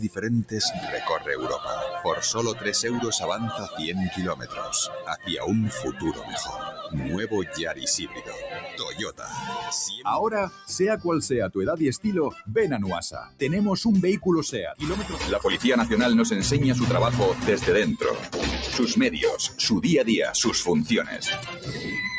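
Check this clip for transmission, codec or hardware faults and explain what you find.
The faults come from processing rather than transmission: a speech noise suppressor was left running on this audio, which passes through call microphone processing that caps content at 8 kHz.

Noise suppressor applied to music or sounds: throughout the clip, the suppressor treats steady, sustained content as noise and pulls it down, with gain swinging by roughly 10 dB. Onsets survive while held parts sink, so the sound pumps and thins. The waveform envelope fluctuates unevenly, and on a spectrogram sustained bands fade between bright attacks.

Sound cut by the noise suppressor: distinct dips occur at 0.03–0.89 s (about 14 dB), 3.58–5.29 s (about 13 dB), 5.73–6.94 s (about 10 dB), 7.44–9.33 s (about 14 dB), 10.49–10.69 s (about 9 dB), 13.24–13.41 s (about 14 dB) and 21.04–21.87 s (about 10 dB). In each, the suppressor judged the material to be noise and attenuated it harder. 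The waveform shows sudden hollows, and the spectrogram shows dimmed patches.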